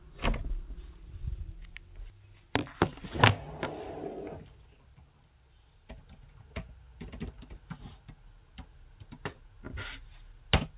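At 2.1 s there's a skip ahead: the sound jumps forward with no gap. Something like 0.4 s of audio was thrown away, most likely by the jitter buffer dumping a backlog that had built up, so playback caught up in one go instead of easing back. The two sides are butted together almost directly, so you hear an abrupt splice where the sound just lurches onward. The call path's bandwidth stops at 4 kHz, which fits a G.711 mu-law codec.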